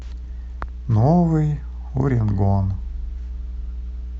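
Mains hum runs through the whole speech clip, a steady 60 Hz tone sitting roughly 10 dB below the signal. The power line has leaked into the recording chain, most plausibly through a ground loop or a transformer near the cabling. What reaches the ear is a constant low drone with some low harmonics above it, unchanged from start to finish.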